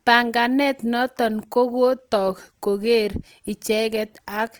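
Opus compression is plainly audible throughout the speech. It sounds rough and grainy rather than swirly. The likely cause is the encoder's music mode filling starved bands with folded or noise content, which fits a 24 kbps stream. The full bandwidth reaches about 20.2 kHz.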